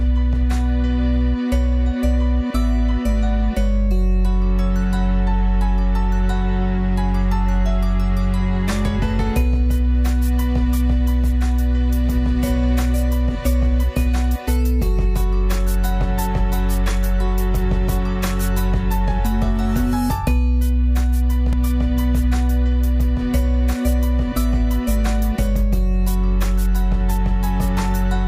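At 21.53 s the audio has a block of digital silence lasting about 2.7 ms. The signal drops straight to silence and returns without any fade, so the two hard edges sit close enough together to be heard as a tick or dip rather than a gap. A hole of this size fits a 128-sample buffer that was not filled in time. The output path left that block as zeros instead of audio.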